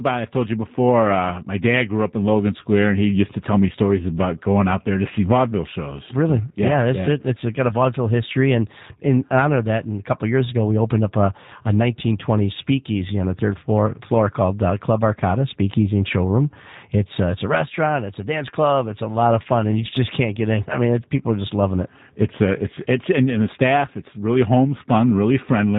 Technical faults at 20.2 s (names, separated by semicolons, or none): G.729 codec